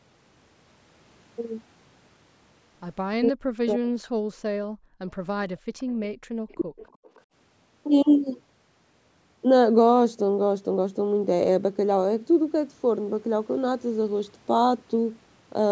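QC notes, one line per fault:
3.14–3.92 s and 6.55–6.82 s, speech suppressed in double talk: the echo canceller most likely could not tell the near talker apart from loudspeaker echo while both sides were active, so it attenuated everything it picked up. The near voice falls away by roughly 40 dB, for about 0.7 s in the first stretch and about 0.3 s in the second. The talker's voice briefly dips away.
4.19–5.0 s and 5.56–6.27 s, background gated by the echo canceller: with the far end playing through the loudspeaker, the canceller clamped the microphone hard. The room tone drops out by about 40 dB in the first gate and about 39 dB in the second, for roughly 0.7 s and 0.5 s of each span. The background goes abruptly dead, then snaps back when the canceller releases.
5.78–5.84 s, 6.48–6.57 s and 6.88–7.21 s, echo leak: residual loudspeaker pickup likely escaped cancellation and was sent back, arriving 313 ms behind the original. 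The leaked copies sit low, roughly 30 to 40 dB under the speech, the loudest near 6.5 s. They come through as short, faint scraps of delayed voice, the last one stretching to about a third of a second.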